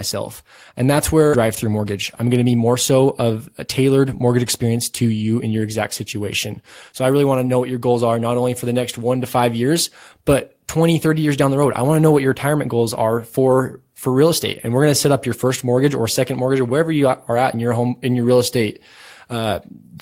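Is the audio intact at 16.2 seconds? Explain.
Yes, the speech at 16.2 seconds comes through intact, with no dropout, click, distortion or other technical fault at that moment.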